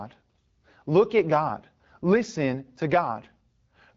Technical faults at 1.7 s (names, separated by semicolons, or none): none